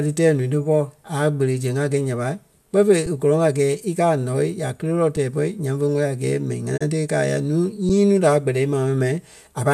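At 3.06 s, 5.16 s (between "kéle lɔɔ" and "tɛɛ bɔ̂i nyaŋ ve") and 7.89 s, an underrun with held sample leaves a 5.33 ms flat stretch, which fits a 256-sample buffer running dry. The waveform shows a short level plateau off zero, a thin vertical seam on a spectrogram. Virtually nothing is lost, so speech resumes softly, almost click-free.

From 6.76 to 6.83 s, just before "ti e", a digital broadcast dropout appears as a 20 ms fade into silence. About 24 ms of audio is gone, pointing to one failed frame. The waveform shows a tapered hole and the spectrogram a brief blank column.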